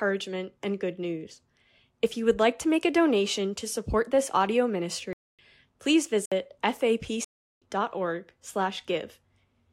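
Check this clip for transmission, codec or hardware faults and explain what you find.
Three blocks of digital silence break the speech, at 5.13 to 5.39 s, 6.26 to 6.32 s and 7.25 to 7.62 s. The output buffer likely wasn't filled in time, and the longest hole fits a 16384-sample buffer. Each cuts abruptly to silence and back, unlike a fade-out or concealed packet loss.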